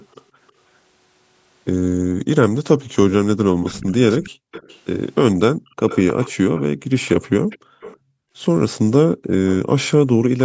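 A faint delayed copy of the speech appears at 0.48 to 0.52 s, roughly 40 dB down, trailing by 317 ms. This is likely echo leak, a loudspeaker's playback getting past the far end's echo canceller and returning. Background gated by the echo canceller follows at 2.02 to 2.24 s: the room sound drops by about 40 dB for a fifth of a second. The echo returns louder, about 20 dB below the speech, at 3.65 to 4.8 s, 5.88 to 7.97 s and 9.46 to 10.4 s. Further room-sound dropouts occur at 4.31 to 4.52 s and 5.54 to 5.76 s, and intermittently between 6.78 and 10.18 s, totalling about one second.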